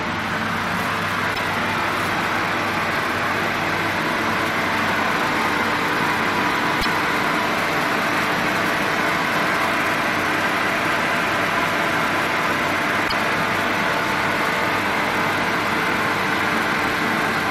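Three short glitches, each about 0.08 s long, break into the audio at 1.31, 6.78 and 13.05 s. This is damaged data in a compressed stream: corrupted bytes make the decoder misread frames and lose sync until it locks onto the next valid frame header.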